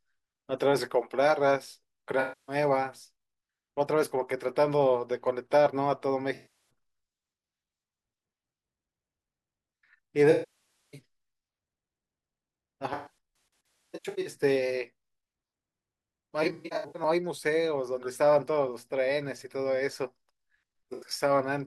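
AAC frame loss with concealment shows up six times in this speech: 2.20–2.56 s, 6.34–6.69 s, 10.31–11.00 s, 12.93–14.34 s, 16.43–17.02 s and 20.93–21.11 s. Each time the decoder lost frames and patched the gap from the last good spectrum, so you get smeared, phasey, noisy stretches. The 10.3 s gap runs longest. The 12.9 s and 16.4 s patches are scattered dropouts with runs of around 150 ms.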